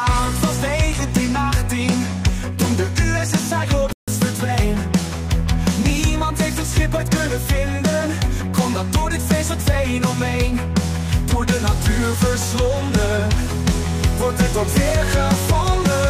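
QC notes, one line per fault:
3.93–4.08 s, rebuffering stall: the audio drops out to dead silence for about 150 ms, then picks up again exactly where it left off, with nothing skipped. That's the player running dry on downloaded data and sitting idle until the next chunk turned up. Because no content is lost, you only hear a clean hole in the timeline rather than a jump, and the clip ends up 150 ms longer than it should be.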